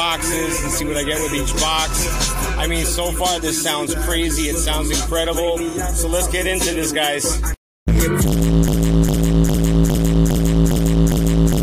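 The playback or stream likely stalled at 8.68 s, resending one held fragment: a broken-record loop of a 0.41 s piece repeated seven times to the end, replacing the audio that should follow.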